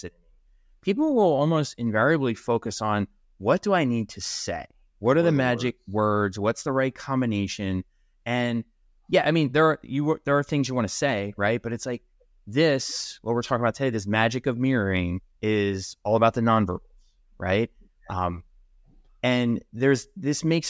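Speech recording, with nothing technically wrong in it.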